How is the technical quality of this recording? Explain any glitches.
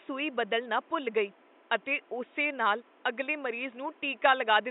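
No glitches are audible here.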